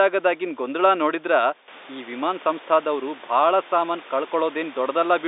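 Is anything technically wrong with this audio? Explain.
No, nothing is technically wrong with this audio.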